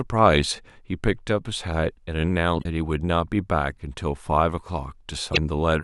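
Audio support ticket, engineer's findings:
Damaged data in compressed stream: two short glitches in speech, 2.60–2.65 s and 5.32–5.37 s (about 50 ms each). Decoder misreads corrupt frames, loses sync, resyncs at next header. Spectrogram: brief disruption; waveform: abrupt discontinuity.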